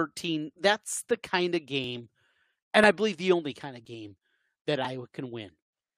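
Speech with small clicks or skips at 0.85, 1.84, 2.84, 3.85 and 4.85 s, one per 1-second segment: overlap between stream segments, where trimming overlapping timestamps removes a sliver of audio.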